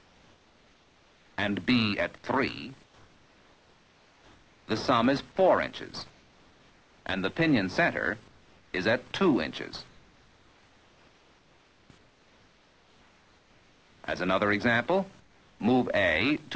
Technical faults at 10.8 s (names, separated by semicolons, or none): comfort noise in place of the background